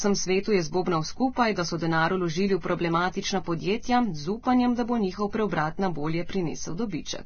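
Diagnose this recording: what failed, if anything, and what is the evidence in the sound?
The failure is at the codec stage. Across the whole speech clip nothing reaches above 6.5 kHz, and the muffled, smeared quality of a starved encoder persists despite the MP3's generous 192 kbit/s. On a spectrogram this appears as a flat ceiling at 6.5 kHz with empty space above it and blotchy, quantised detail below. The likely cause is low-bitrate audio saved at a high bitrate, with an earlier Vorbis pass near 18 kbit/s whose losses the second encode cannot restore.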